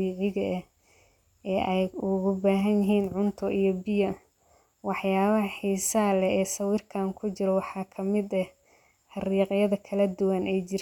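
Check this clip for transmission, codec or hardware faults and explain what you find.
No transmission, codec or hardware faults are audible anywhere in this speech recording.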